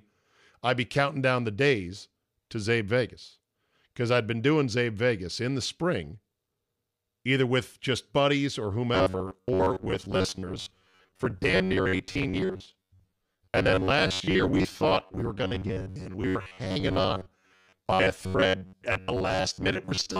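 From 8.95 s, right after "with just buddies or", to 20.19 s, the speech collapses into a rigid metallic buzz near 93.8 Hz: robotic sound from repeated short buffers, likely from roughly half the audio being replaced by loops of a 10.7 ms chunk. Unlike dropouts, there are no silent gaps.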